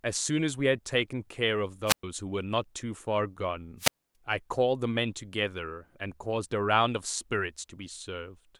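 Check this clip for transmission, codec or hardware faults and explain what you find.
Two wireless microphone squelch dropouts interrupt the speech, at 1.86 to 2.03 s (muted about 112 ms) and 3.78 to 4.15 s (muted about 273 ms). As the FM radio link fades, hiss rises until the receiver's squelch mutes the output. On a spectrogram, broadband noise is followed by a blank gap; the waveform drops flat.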